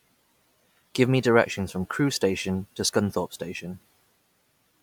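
No technical faults are audible in this recording.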